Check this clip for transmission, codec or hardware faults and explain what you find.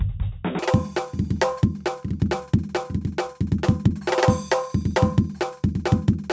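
One fault is present. From 0.59 s to the end at 6.33 s, a wrong sample rate: playback runs at double the recorded rate, so the music is twice as fast and an octave higher.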